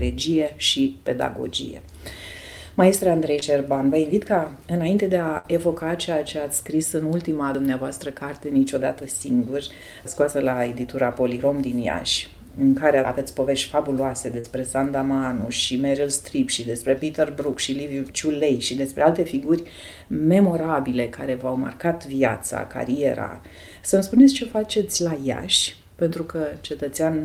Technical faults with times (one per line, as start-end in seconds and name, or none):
3.39-3.43 short concealed packet loss
5.37-5.46 burst of packet loss
7.55 audio missing between chunks
14.40-14.46 short concealed packet loss
17.53 audio missing between chunks
24.18-24.21 short concealed packet loss